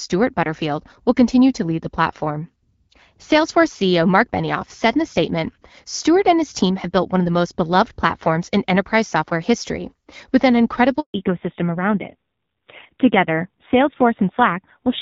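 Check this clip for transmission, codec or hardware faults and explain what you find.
Two faults are audible: a brief dropout followed by a loss of bandwidth that lasts to the end.

A handover gap runs from 11.0 to 11.14 s, just after "software history with an". The call switched networks and no speech frames arrived for 140 ms, so the sound cuts out quickly and stays silent until the new link carries audio again. That stretch of speech is lost.

A fallback to narrowband follows from 11.14 s to the end. Before the switch, the wideband sound fits AMR-WB at around 12.65 kbit/s with light coding damage. Afterwards nothing remains above 4 kHz, and the duller, rougher sound points to AMR-NB at about 5.9 kbit/s.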